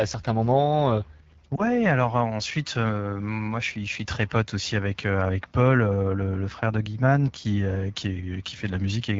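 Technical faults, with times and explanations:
Throughout: AMR wideband (HD Voice) codec. The speech is squeezed through AMR-WB at a low rate, which fits the 8.85 kbit/s mode. Too few bits describe each pulse-driven excitation, so the speech sounds plainly rough and raspy, with a noisy, synthetic top end above 6.4 kHz.
1.56 to 1.62 s: lost AMR speech frame. Just after "certains moments" and before "alors ensuite moi", one 20 ms frame failed its radio checksum. The decoder repeated the previous pitch and vocal tract settings at lowered gain, giving a brief dip or warble before normal decoding resumes.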